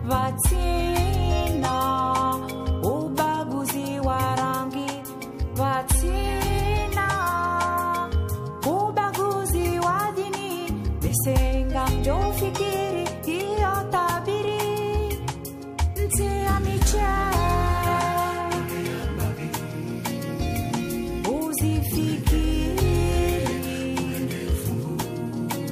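At 8.91 s and again at 14.48 s there's a single sharp click, a thin vertical line in the spectrum. That's likely dropped samples: a tiny fraction of a millisecond goes missing, so the waveform jumps straight to a later value.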